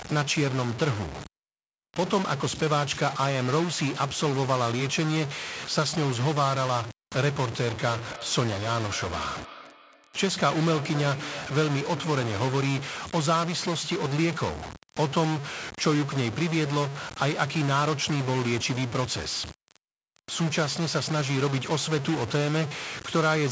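Speech carries a distortion from start to finish that is likely a stuck bit. On the waveform the samples jump in fixed-size steps, and on the spectrogram broadband hash fills even the pauses. From 7.65 to 12.75 s a feedback echo between two devices brings each phrase back roughly every 300 ms, at its loudest about 16 dB below the speech. It shows on the spectrogram as fainter, thinner copies trailing each burst at even spacing, all stopping at 8 kHz like the rest of the call-processed audio.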